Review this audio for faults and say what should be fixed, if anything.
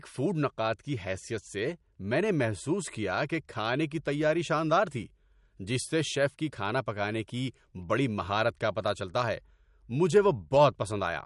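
Likely MP3 compression throughout, starved of bits at what sounds like about 48 kbps: nothing survives above 11.2 kHz, and flickering weak frequency lines make the speech watery. Keep the recording in a lossless format, or encode at a much higher bitrate, so the encoder doesn't have to discard treble and quiet detail.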